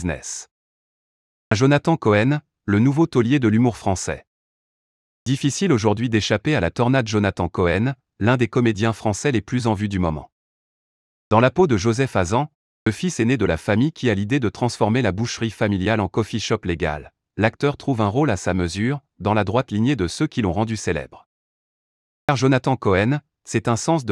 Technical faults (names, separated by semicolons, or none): clipped start after a pause